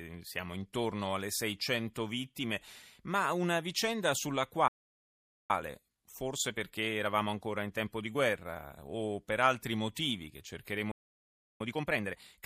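A speech clip whose player twice likely ran out of buffered data or had its thread blocked, producing playback stalls: the speech cuts to silence from 4.68 to 5.50 s (about 0.82 s) and again from 10.91 to 11.61 s (about 0.69 s). After each stall the player works off its backlog with time-compressed catch-up, removing small slices and cross-fading the joins. The speech is therefore hurried at unchanged pitch. It runs at 1.1 times speed from 5.50 to 8.50 s and at a more obviously rushed 1.5 times from 11.61 s to the end.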